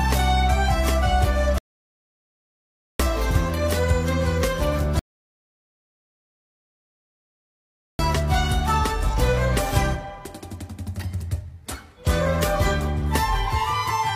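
The player twice ran out of downloaded audio and halted until more data arrived, causing a rebuffering stall: silence from 1.58 to 3.00 s, adding 1.4 s, then from 4.99 to 7.99 s, adding 3.0 s. Each time, the sound resumes exactly where it stopped, with nothing skipped.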